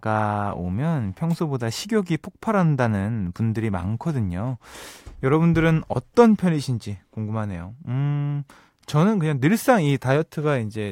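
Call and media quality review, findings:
No faults found in this speech recording. Nothing to raise against any component.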